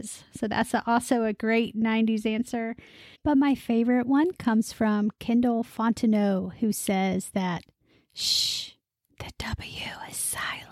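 No technical faults can be heard anywhere in the recording, and the signal stays intact and continuous throughout.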